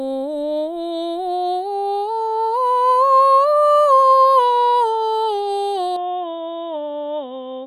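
At 5.96 s the music suddenly goes dull and boxy, with nothing above about 3.7 kHz, drops a few decibels and picks up a faint new noise floor, with no gap at the change. That's likely the input switched to a poorer device, running to the end.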